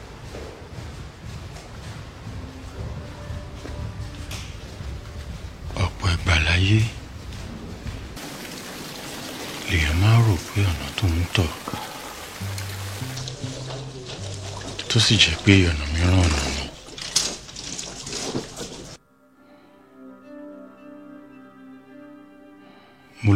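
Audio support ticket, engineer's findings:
No audible defects on review: level, continuity and timing hold steady across the whole signal, with nothing to attribute to any component in the chain.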